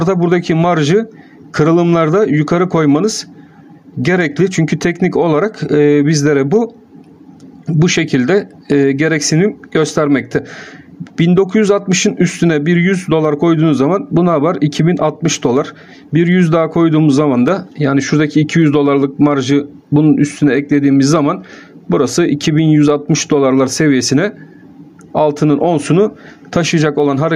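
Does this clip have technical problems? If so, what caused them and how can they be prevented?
Yes, there's gain pumping all the way through. The gain keeps being pulled down under every loud sound and recovering in between, with a swing of around 10 dB, so loud and soft parts sit unnaturally close and everything feels squashed. The likely cause is input gain set far too high, with a fast limiter or compressor clamping down on each peak and releasing in between. To prevent it, lower the input gain and use gentler, slower dynamics processing.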